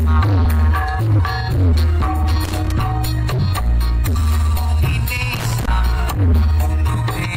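At 2.44 s, a burst of loose connector crackle runs for about 0.28 s. It returns at 5.36 s for about 0.32 s. A worn contact is making and breaking, so the signal is chopped into irregular scratching.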